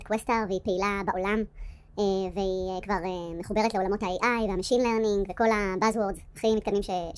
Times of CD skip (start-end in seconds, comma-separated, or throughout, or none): none